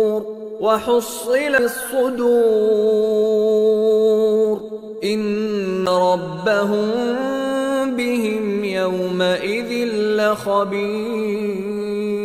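Twice the audio drops out for a split second with a small tick and then carries on from a different point, as if a short stretch were cut or repeated: once at 1.58 s and again at 5.86 s, the silences lasting only around seven and ten milliseconds. These are CD skips. The pickup laser lost its track and landed on another turn of the disc's spiral, so the player muted briefly and resumed playback from that new position.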